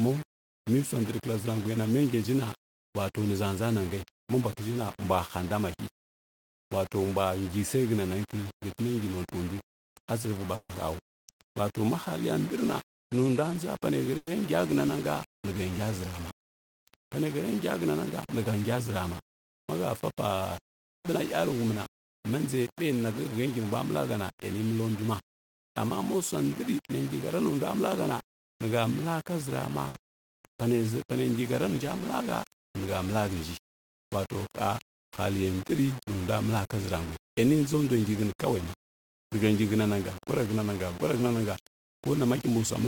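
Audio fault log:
throughout: low bit depth without dither. The speech sits on about five bits of resolution, likely rounded without dither, so quiet passages turn gritty with signal-following distortion roughly 15 dB below the signal.
10.55–10.72 s: call audio freeze. Right after "notuindu a tsiviɓa" a fading buzz or hiss continuing the last sound fills 140 ms, likely from an emptied jitter buffer, then speech resumes intact.
14.17–14.30 s: call audio freeze. Another 100 ms of fading continuation is inserted, likely while packets were held up. Nothing is lost, but a gap is added.
13.91–18.77 s, 22.83–25.04 s, 33.88–38.55 s: jitter buffer speed-up. Short pitch-period pieces are trimmed to cut excess delay. The first and last runs are about 1% faster, with 70 ms removed before "zurama mahəfa" and again later. The middle run is 8% faster, roughly 200 ms removed, and sounds hurried.
29.88–29.97 s: short stall from a late packet. 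A missing packet left the last sound stretched for 60 ms with a slight buzz or dip before speech continues from the same point.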